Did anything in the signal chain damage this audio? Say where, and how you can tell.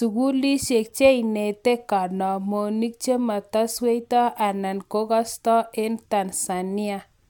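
No, nothing along the way seems to have done any harm here; the speech comes through without anything for the ear to catch on.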